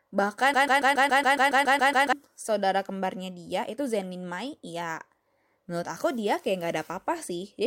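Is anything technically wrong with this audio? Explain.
Yes. The speech has a broken-record loop from 0.54 s to 2.13 s. A fragment of about 140 ms repeats exactly, back to back, 11 times. It sounds like a stutter with a rhythmic flutter. The likely cause is a stalled player, encoder or stream that kept resending the last piece it held. Whatever should have played in that span is lost. Normal speech resumes with "saudara kembarnya dia itu".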